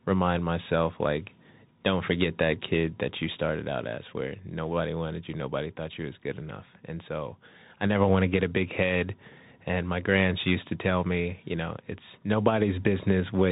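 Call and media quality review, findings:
Bluetooth CVSD headset codec throughout: speech dead above 3.8 kHz, scratchy s sounds, grainy hiss underneath. One-bit delta coding, fits a 64 kbit/s stream, step can't keep up.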